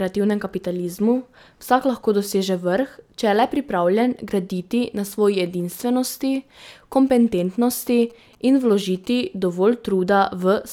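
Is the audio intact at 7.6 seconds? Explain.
No. From 7.07 to 9.06 s, GSM signalling bursts intrude: a nearby 2G phone's short transmission groups are rectified by the audio circuitry, producing a galloping pattern of brief 217 Hz buzzes roughly 30 dB below the speech.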